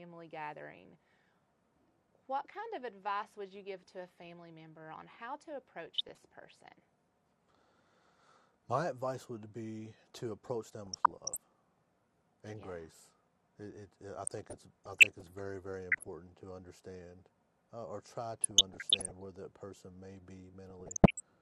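Right through, the audio sounds dull and gurgly, likely MP2 compression at around 80 kbps, with upper sub-bands dropping out and coarse quantisation. Then DAB burbling, bit errors slipping past error correction, puts short blips of noise into single sub-bands at 5.86–6.25, 10.86–11.37, 14.27–15.23, 15.92–16.14, 18.33–19.23 and 20.70–21.20 s.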